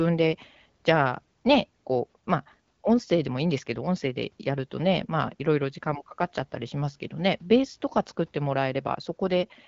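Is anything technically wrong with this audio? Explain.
No, nothing stood out as a technical problem on listening to this speech clip.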